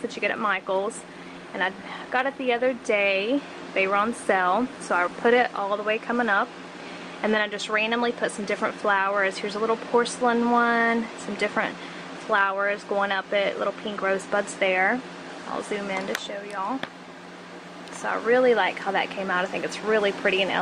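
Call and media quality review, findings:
No faults found on this clip.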